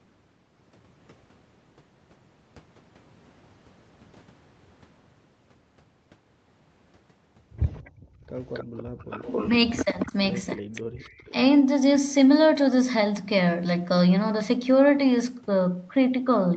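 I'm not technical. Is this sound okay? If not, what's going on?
No, there are a few problems, all packed into the middle of the clip.

First, an echo leak. At 7.63 to 7.9 s, 8.48 to 10.12 s, 10.51 to 10.82 s and 11.18 to 11.32 s you can hear a second, delayed copy of the voice trailing about 0.27 s behind. It's faint at first, gets quite noticeable in the 8.48 to 10.12 s stretch, then fades to scraps. The likely cause is that someone on the call was using a loudspeaker, and their echo canceller didn't catch everything their microphone picked back up.

Second, the background gated by the echo canceller. From 7.9 to 8.27 s and again at 8.85 to 8.98 s the room sound briefly drops away to almost nothing, then comes back. That's the canceller clamping the microphone down hard while the loudspeaker was playing and letting go a moment later.

Third, speech suppressed in double talk. At 9.85 to 10.14 s the voice dips a little, and at 10.56 to 11.18 s it gets cut much harder, almost disappearing in places. 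This likely happened because both people were talking at once, and the canceller couldn't tell the real talker from the echo, so it turned everything down together.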